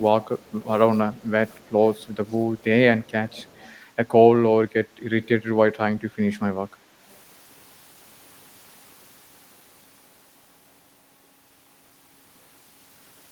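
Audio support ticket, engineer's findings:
Echo leak. Faint delayed copy of the speech, trailing the original by about 0.27 s. Heard at 0.39–0.66 s, 1.16–2.64 s, 3.03–3.78 s, 4.99–5.29 s and a brief scrap near 7.1 s. Echo sits well below the direct speech, slightly stronger around 5 s, barely audible at 7.1 s. Likely cause: far-end loudspeaker playback reaching its microphone, with the echo canceller not fully removing it before sending back.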